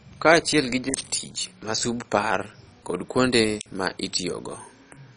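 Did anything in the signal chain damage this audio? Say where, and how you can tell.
Yes. The codec stage likely ran MP2 compression at a bit rate low enough to suggest about 32 kbps, switching off upper sub-bands. The speech sounds dull throughout, with nothing above 10.3 kHz, and has a gurgling, granular distortion.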